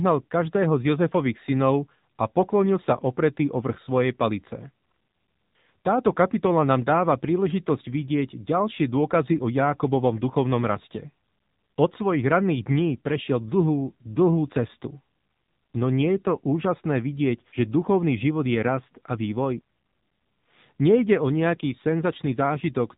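From start to finish the speech carries the AMR narrowband mobile codec sound. Nothing reaches above about 3.8 kHz, and the codec damage is plainly audible. The voice has the synthetic, buzzy texture of a vocal tract model driven by a pitch predictor and a few pulses per 5 ms frame, which points to a low rate around 7.4 kbps. A plain low-pass filter or simple downsampling would remove the same top octave but leave the remaining voice natural, without this rebuilt, pulse-driven quality.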